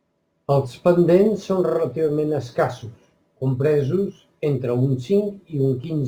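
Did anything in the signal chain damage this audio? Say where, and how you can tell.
Yes. Crude rate conversion at the sample-rate stage throughout: an inharmonic fizz tracks loud, bright speech, unlike clipping, which would appear only at peaks. The faint grit points to nearest-sample dropping from 48 kHz to 44.1 kHz.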